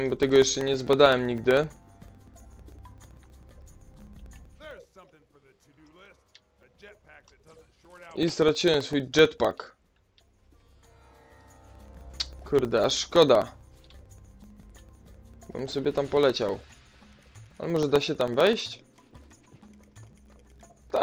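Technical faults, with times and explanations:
0.10–20.97 s, periodic USB or driver dropouts: there's a steady tick running nearly the whole way, every 64 ms, so about 15 or 16 a second and a few hundred in total. Something is stalling the USB bus or audio driver on a fixed schedule, and each stall drops around a millisecond of audio, filled with silence. Those tiny gaps cut the waveform sharply, so you hear a regular click wherever there's signal underneath.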